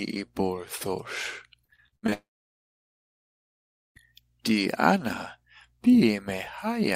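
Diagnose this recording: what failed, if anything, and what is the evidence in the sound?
The network failed first with repeated packet loss, giving a robotic sound from 1.65 to 2.14 s. Seven gaps fall in that half second, the longest 67 ms. Each is patched by repeating the last sound, so about 42% of the stretch is concealed.

Then a long network dropout is the likely cause of what follows from 2.14 to 3.97 s. The last sound is stretched briefly and fades. About 1.7 s of silence follows. Audio resumes at 3.97 s, with roughly 1.8 s lost.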